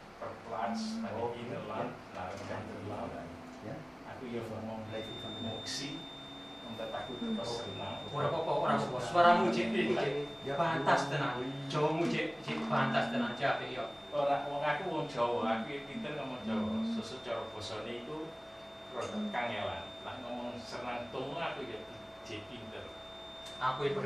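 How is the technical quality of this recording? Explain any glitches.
The recording carries one persistent fault, a feedback whistle. From 4.81 s to the end at 24.06 s, a thin, steady 3.6 kHz tone sits roughly 15 dB below the main sound, swelling and fading slowly in level. The likely cause is a loudspeaker-to-microphone loop held just at the edge of feedback, so it sustains a single frequency without building further.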